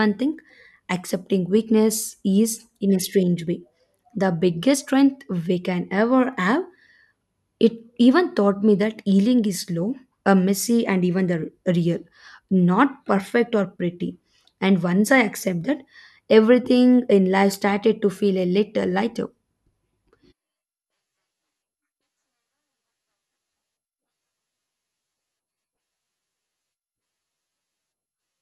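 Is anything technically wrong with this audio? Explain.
No, nothing technically wrong can be heard here.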